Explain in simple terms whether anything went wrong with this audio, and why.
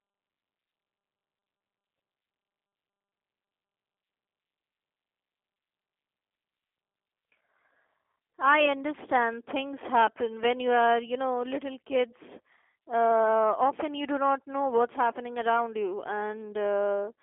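The speech sounds thin, boxy and slightly rough or robotic from start to finish. That's G.729 codec damage: a low-bandwidth phone-call codec that rebuilds the voice from a rough model instead of sending it faithfully, and it drops everything above about 3.5 kHz, so the brightness and crispness are gone.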